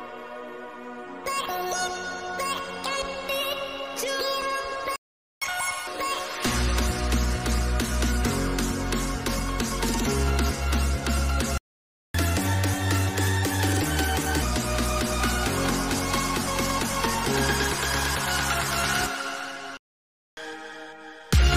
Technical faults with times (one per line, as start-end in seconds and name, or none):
4.96-5.42 playback stall
5.42-5.87 catch-up at higher speed
11.58-12.14 playback stall
12.14-14.42 catch-up at higher speed
19.77-20.37 playback stall
20.37-21.56 catch-up at higher speed